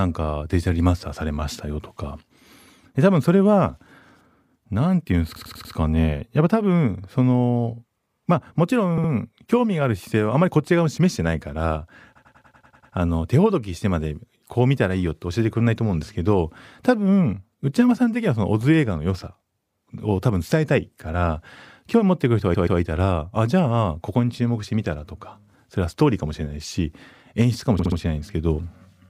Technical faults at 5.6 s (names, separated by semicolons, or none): repeated frames